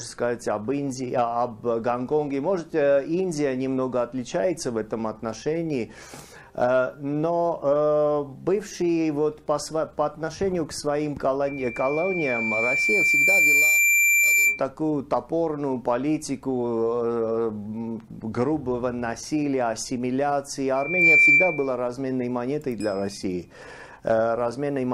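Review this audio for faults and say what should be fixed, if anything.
Loudspeaker feedback squeal at 11.47–14.62 s and 20.75–21.74 s: a steady 2.4 kHz tone swells over about two seconds, then within a fraction of a second, unlike hum's fixed onset. To prevent it, lower the gain or move the microphone out of the loudspeaker's coverage.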